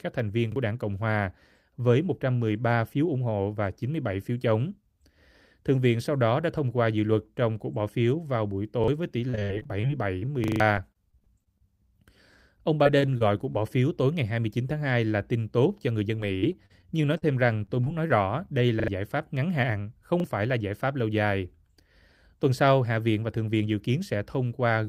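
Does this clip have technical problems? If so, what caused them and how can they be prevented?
Yes. Three kinds of fault are audible in this speech clip.

The repeated buffer fault occurs at 0.52 s, 8.84 s, 10.44–10.60 s, 18.80–18.88 s and 20.20 s. Each time, new audio did not reach the playback device in time, so it replayed the piece it already held. One extra play gives a single 40 ms stutter. At 10.44 s the piece sounds four more times, and at 18.8 s twice. This fits a 40 ms buffer. Unlike packet loss, the identical fragment returns with a hard join every time. A larger output buffer, or a playback thread that is never starved, would prevent it.

The repeated packet loss (robotic sound) fault appears over four stretches: 9.29–11.62 s, 12.58–13.56 s, 16.16–17.24 s and 17.66–18.49 s. Packets kept going missing, and each hole was patched by extending the last sound before the next hole arrived. 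In the first stretch almost a fifth of the span is patched, with holes up to 60 ms long. This sounds choppy, not like an exact replay. Forward error correction and a more stable network path would prevent it.

The jitter buffer speed-up fault affects 15.87–16.10 s, which runs about 13% fast, and 23.53–24.15 s, which runs about 8% fast. After delayed packets arrived in a bunch, the receiver trimmed many short pitch-period pieces, a few tens of milliseconds in total, to catch up. The speech sounds hurried, but the pitch stays the same and nothing repeats or drops out, which sets it apart from the other two faults. A steadier network, or a gentler catch-up setting on the jitter buffer, would prevent it.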